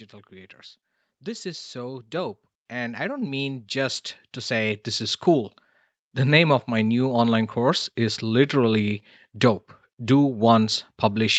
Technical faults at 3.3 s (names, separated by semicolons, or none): automatic gain rising